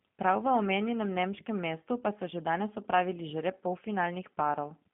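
The whole clip runs through the G.729 codec, and you can plainly hear it. The band is squeezed to roughly 150 Hz to 3.4 kHz, and the speech comes out slightly rough and synthetic, the way a pulse-rebuilt voice at 8 kbit/s does.

At 1.82 s there's a tiny patch of VoIP packet loss concealed by the speech codec. About 10 ms goes missing, which fits a single lost frame, and the decoder fills it with a brief smear stretched from the preceding sound.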